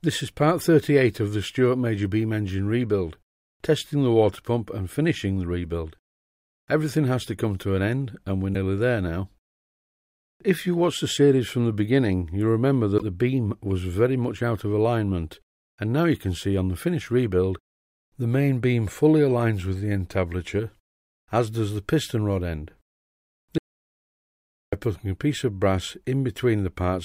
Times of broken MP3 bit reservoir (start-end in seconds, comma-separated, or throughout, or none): 8.53-8.56, 12.97-13.03